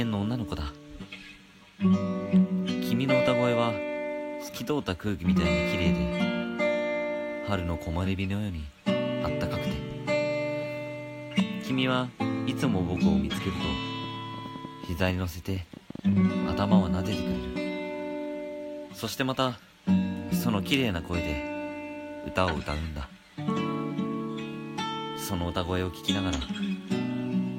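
From 12.38 to 17.57 s there is a train of clicks. About forty pulses arrive, roughly 7.3 per second, at an irregular pace. Each peaks about 5 dB above the sound. They tick and pop throughout, even in pauses. Likely interference or a faulty connection or power supply.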